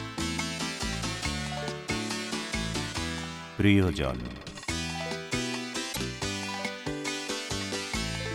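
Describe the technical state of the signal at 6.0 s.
Damaged data in a compressed stream sits just before this moment, from about 5.89 to 5.97 s. Part of the encoded data there is corrupt, so the decoder misreads or discards those frames, loses its place in the stream, and has to hunt for the next valid frame header before it can resume. For roughly 80 ms this comes through as a short chirp, squawk or blip cutting into the audio, ending just before 6.0 s.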